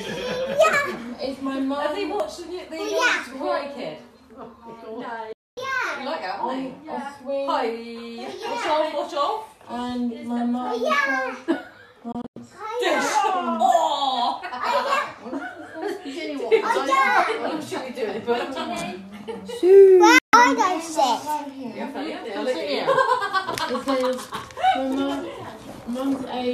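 Digital broadcast dropouts occur at 5.33 to 5.58 s, 12.12 to 12.37 s and 20.18 to 20.34 s. Each time, the receiver stops getting valid frames and mutes, fading out within 3 ms. The audio vanishes and later resumes, with the material in between lost. The first gap is a clean 240 ms silence. The second is several short holes totalling 144 ms across 240 ms, the longest 96 ms. The third is a single 144 ms gap. These lengths fit frames of about 24 ms being dropped.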